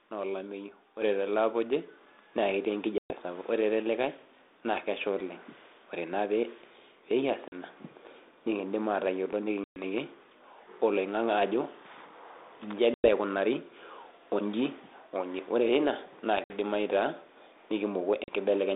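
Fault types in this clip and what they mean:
Microphone volume stepped up: the input gain was raised in a single jump of about 7 dB at 1.02 s, lifting speech and background together.
Packet loss on an ADPCM call: six hard-edged silent gaps of 40 to 120 ms, after which the desynchronised decoder returns slightly distorted, one following "onji ore teina na".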